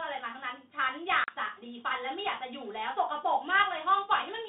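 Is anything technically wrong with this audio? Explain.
Yes. There is packet loss on an ADPCM call, from 1.24 to 1.35 s. About 40 ms of the speech drops out into a hard-edged silence, which fits roughly two lost packets. The decoder predicts each sample from earlier ones and adapts its step size as it goes. Across the gap it loses step with the sender. So the speech comes back slightly distorted before settling. The line carries G.726 at 32 kbit/s, limited to about 150 Hz to 3.7 kHz.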